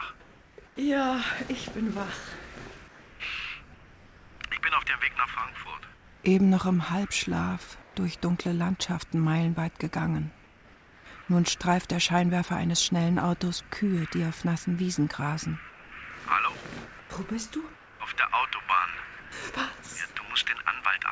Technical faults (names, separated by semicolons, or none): comfort noise in place of the background